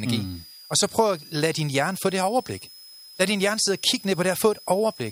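Speech runs the whole way through with a switching supply whistle sitting underneath it, a thin high tone wandering between about 4.8 and 5.2 kHz, roughly 5 kHz on average and some 20 dB below the voice. That drift is the giveaway: a switch-mode power supply dropping into an audible burst mode, or two supplies beating against each other, so the pitch shifts with load.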